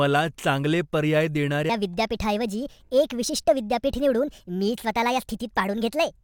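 Section at the wrong speed, 1.69 s onward after "चांगले पर्याय": speech plays 1.42 times fast, roughly seven semitones higher, likely from resampling to the wrong clock.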